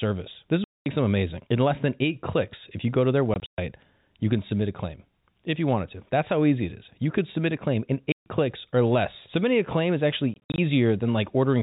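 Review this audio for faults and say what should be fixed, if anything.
Packet loss filled with silence: packets were dropped on the network and the receiver played silence in their place. The result is sudden, hard-edged holes in the speech. These occur at 0.64–0.86 s (just before "them amazing"), 3.34–3.58 s (scattered gaps), 8.12–8.26 s (between "submit a claim in" and "clicks or less") and 10.34–10.58 s (after "a claim is"). The gap lengths fit 20 ms packets.

To prevent this, enable packet loss concealment at the receiver and add forward error correction or redundancy so that lost packets are rebuilt instead of silenced.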